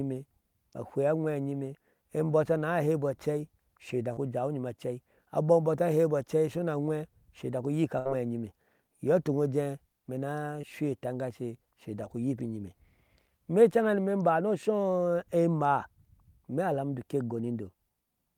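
Speech with short concealed packet loss at 4.13–4.19 s and 10.61–10.65 s. About 34 ms and 18 ms were extrapolated from preceding sound, showing as brief smeared harmonics on a spectrogram. A burst of packet loss at 7.99–8.07 s drops about 60 ms. The receiver sustained and faded the last sound, visible as flattened, decaying bands and a shrinking waveform envelope.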